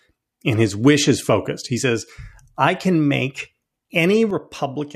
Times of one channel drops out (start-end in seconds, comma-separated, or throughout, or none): 4.30-4.95